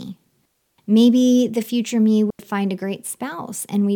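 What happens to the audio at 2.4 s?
Just after "the future me", the speech drops into a clean hole of near silence from 2.30 to 2.39 s, about 90 ms, with no noise burst, before resuming at "find a". This is a digital wireless dropout: the receiver lost too much data and muted with a very short fade.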